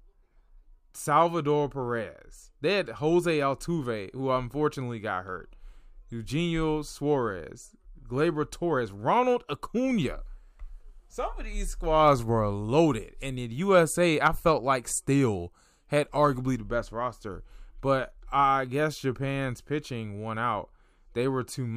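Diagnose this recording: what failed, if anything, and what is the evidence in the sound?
Nothing in the chain failed, with no dropout, click, distortion, level jump or timing break anywhere in the recording.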